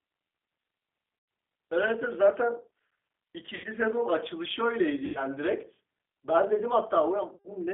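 The speech here has been carried over a G.729 codec, a low-rate VoIP coder whose sound fits 8 kbit/s. It rebuilds each short frame from a vocal-tract filter, a pitch predictor and a handful of pulses. The line is confined to roughly 300 Hz to 3.5 kHz, so the voice is thin and boxy, with a plainly audible rough, synthetic graininess. On top of that, the call suffered VoIP packet loss concealed by the speech codec. Four times, about 90 ms of audio went missing, which fits three lost packets each: at 1.19 to 1.28 s, 3.55 to 3.67 s, 5.06 to 5.23 s and 7.36 to 7.49 s. In each gap the decoder extends the last pitch and filter at falling gain, so the voice smears into a brief buzzy tone or coloured noise that fades. Because each frame builds on the one before, it stays weak or distorted for a moment after the packets resume.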